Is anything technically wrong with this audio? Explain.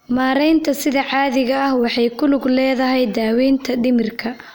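No, nothing technically wrong here.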